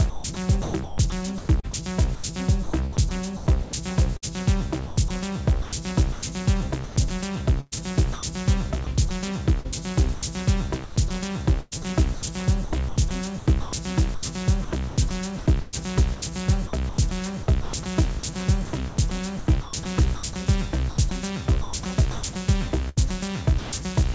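A recording of everyday sounds, carried over a call path whose G.722 coding leaves nothing above 8 kHz, is chopped between 0.10 and 11.73 s and again from 10.14 to 23.72 s, likely by the voice detector, with about 2.0 s and 2.7 s replaced by comfort noise. The waveform shows abrupt drops to a flat noise floor, and the spectrogram shows smooth synthetic noise bands interrupting the real texture.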